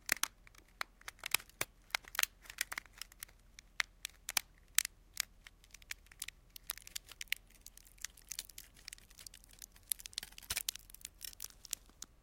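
Nothing stood out on listening to this recording of sounds.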